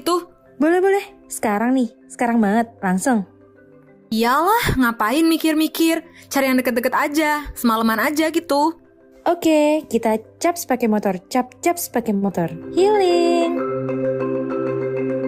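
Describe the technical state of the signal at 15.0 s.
Jitter buffer speed-up runs from 14.86 to 15.22 s. With more audio queued than its target, the receiver repeatedly cut short pitch-period pieces, about 50 ms in all, so the sound plays at 110% speed with unchanged pitch and feels rushed.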